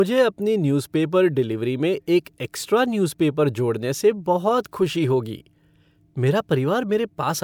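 Speech recording, no technical faults detected.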